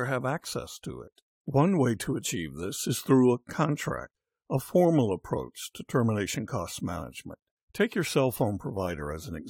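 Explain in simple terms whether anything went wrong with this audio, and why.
At 7.40 to 7.42 s the speech drops out for about 22 ms with abrupt edges: a gap between stream segments. The timing of two consecutive segments, which appear to be 2-second chunks, left a small hole, and the player filled it with silence. No audio was actually lost.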